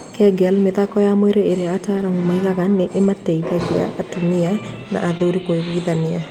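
A speech recording with three short spots where packets were lost and the gaps were covered over. At 1.97 to 2.03 s and 3.03 to 3.05 s, the sound turns briefly rough and grainy with no break in it. This is a lost packet rebuilt from error correction. The first repair rebuilds about 40 ms, which fits two separate packets, and the second about 20 ms, one packet. In each case the following packet carried a low-bitrate duplicate that the decoder played in place of the missing audio. On a waveform the envelope stays continuous. A spectrogram shows a thin, noisier band where the fine harmonic detail coarsens for those few frames. At 5.17 to 5.21 s there is a short concealed packet loss: about 20 ms never arrived and was filled by extending the preceding sound, so it is heard as a brief smear or wobble. Here the second half of that span, 5.19 to 5.21 s, was also rebuilt from error correction. 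The spectrogram shows the preceding sound stretched out, and the waveform shows that extended stretch blending back into the real signal.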